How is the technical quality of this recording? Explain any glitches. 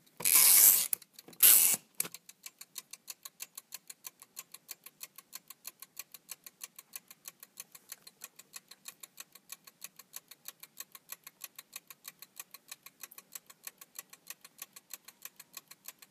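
The recording has two short dropouts, both blocks of digital silence, at 0.44 s and 4.22 s. The first lasts 2.9 ms and the second 5.8 ms. Each time, the output buffer was likely not filled in time, so zeros went out in its place. The lengths fit a 128-sample buffer and then a 256-sample one. The sound cuts to nothing and back without a fade, so each dropout is heard as a tick or small pop. On a waveform it appears as a near-flat gap with abrupt vertical edges. On a spectrogram it shows as a thin black slot with a bright full-height stripe at each edge.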